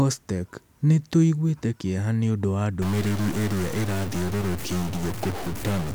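Speech runs cleanly until 2.82 s, where a stuck bit sets in and lasts to the end: the sound turns harsh and buzzy, and pauses fill with a steady noise floor at around -30 dBFS, a fairly high-weight bit. The likely cause is a broken data line or converter. Unlike clipping, the distortion doesn't depend on loudness peaks, and unlike coarse requantisation, the silent gaps hiss rather than falling quiet.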